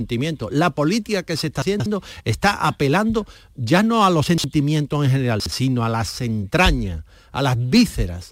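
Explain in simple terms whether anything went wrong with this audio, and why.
The recording system delivered some small pieces of audio, each 60 milliseconds long, in the wrong order. This is called chunks out of order. At 1.62 to 1.86 s, one piece played three pieces late; at 4.26 to 4.44 s, two late; at 5.4 to 5.52 s, one late. No sound is missing, but each spot plays briefly jumbled.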